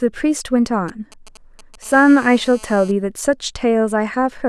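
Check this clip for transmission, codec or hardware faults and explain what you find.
Two kinds of radio-frequency interference from a nearby 2G phone run back to back through the middle of the speech.

From 0.88 to 1.84 s there is a galloping dit-dit-dit of short raspy buzzes, sitting well below the speech, somewhere around 25 dB down. These are GSM signalling bursts. A phone exchanging control traffic with the network transmits short clusters of radio pulses, and the audio circuitry rectifies them into audible clicks and fragments of a 217 Hz buzz.

From 1.85 to 2.92 s the pattern becomes a continuous hard, raspy buzz at 217 Hz, rich in harmonics and unrelated to the speech, at about 25 dB below the speech. This is GSM phone buzz. Once the phone is in a call, it transmits in bursts 217 times a second without a break, and the rectified pulse train becomes a nearly steady buzz.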